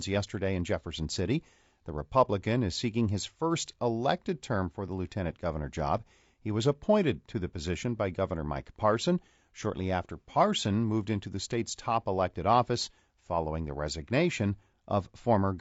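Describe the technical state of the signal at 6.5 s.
At 6.5 s the speech sits inside low-delay AAC compression that runs through the whole clip, most likely a low-delay encoder of the AAC-ELD kind working at a tight bitrate, roughly what 32 kbps would give. Its short frames, around 10 ms each, cannot separate the voice's pitch harmonics cleanly, so the damage is plainly audible: the voice sounds rough and grainy, noise fills the gaps between harmonics, and the top band comes across thin and synthetic.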